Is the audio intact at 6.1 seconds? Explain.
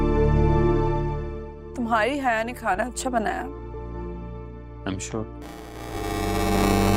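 No. Buffer tearing runs from 5.41 s to 6.96 s. The program writing the playback buffer and the hardware reading it have slipped. About a third of each buffer replays audio roughly 10 ms old. The hard joins make a 375 Hz robotic buzz, which fits a 128-sample buffer.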